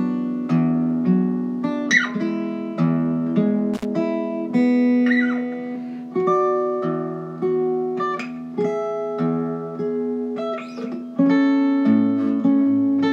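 At 3.74 s an intermittent contact fault breaks the sound for a short stretch ending around 3.85 s, with the line actually open for about 53 ms inside that window. A loose plug or cable briefly lost its connection, so the signal drops away with crackle at each edge and faint hiss fills the gap. That ragged, noisy onset and release sets it apart from a digital dropout, where the cut is clean and the gap truly silent.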